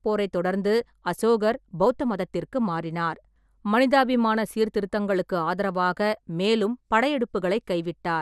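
Dull, gurgling speech runs the full length of the recording, with a granular roughness on the voice and nothing above 14.3 kHz. Upper detail seems to flicker in and out. That points to MP2 compression as the likely cause: MPEG Layer II divides the spectrum into 32 sub-bands and, when bits are scarce, drops the top bands entirely and quantises the rest coarsely. The plainly audible damage fits a low bitrate around 80 kbps.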